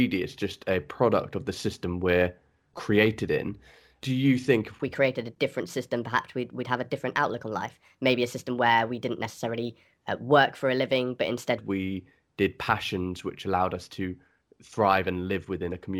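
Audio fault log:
4.83–11.58 s, section at the wrong speed: speech runs 1.23 times too fast, lifting pitch roughly four semitones, likely from playback against a mismatched clock.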